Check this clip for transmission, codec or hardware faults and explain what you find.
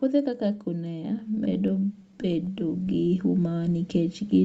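Two faults are audible: a gain that keeps climbing, and a burst of stuttering.

Automatic gain rising runs from 0.05 s to the end. The gain control judged the input too quiet and kept raising it, so speech and background noise swell together. Unlike a level jump, the change is slow and never settles.

Repeated stalls (stutter) occur between 1.35 s and 2.50 s: thirteen brief hitches, none longer than 22 ms, together about 153 ms of stretched sound. Packets arrived late, the jitter buffer repeatedly ran dry, and the receiver extended the last sound each time. Nothing is lost, unlike dropouts, so the speech drags rather than skipping.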